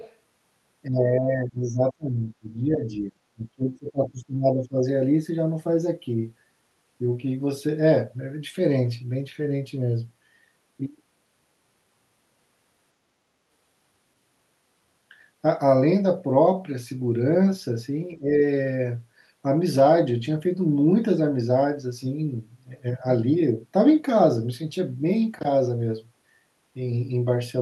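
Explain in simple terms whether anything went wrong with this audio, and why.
Other side's voice leaking through, 0.00 to 0.16 s: a faint second voice is heard, likely loudspeaker echo that the echo canceller failed to fully remove.

Speech suppressed in double talk, 0.87 to 4.78 s and briefly at 18.18 s: the voice drops sharply, then dips less deeply, likely because the canceller turned down both sides during overlapping talk.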